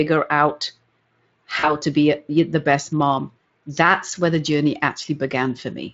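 Speech, coded with Speex, has one dropout from VoIP packet loss concealed by the speech codec, at 1.59 to 1.73 s, just before "to be a the". About 40 ms of audio went missing, which fits two lost 20 ms frames. The decoder filled the gap by extending its last pitch and filter, so the sound smears into a fading buzzy tone or coloured noise. The distortion outlasts the gap, since each rebuilt frame feeds the next.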